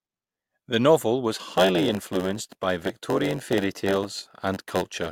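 From 1.47 s to the end, a block size mismatch (padded) sets in: each short block is zero-filled to a longer size, giving a 92 Hz buzz and speech slowed to 0.919 speed with its timbre unchanged. The waveform shows regular gaps, the spectrogram thin vertical stripes.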